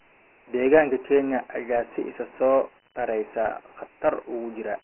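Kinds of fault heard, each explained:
Dialogic VOX ADPCM: the speech stops at about 3 kHz, which fits 4-bit ADPCM at 6,000 samples a second, and a gritty hiss rises and falls with the voice, unlike plain telephone band-limiting.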